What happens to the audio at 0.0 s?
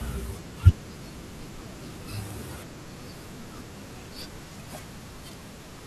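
Nothing goes wrong at 0.0 s; the audio is intact, with no dropout, click or distortion at that point.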